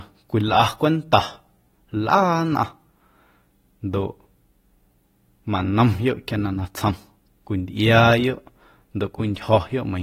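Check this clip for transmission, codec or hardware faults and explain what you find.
One codec fault runs through the whole recording. AAC compression was likely applied at a low bitrate, consistent with roughly 32 kbps AAC-LC. The encoder quantises each frame's spectrum coarsely, so the speech sounds dull and smeared, with a warbling, fizzy edge on sibilants and nothing above 16.6 kHz.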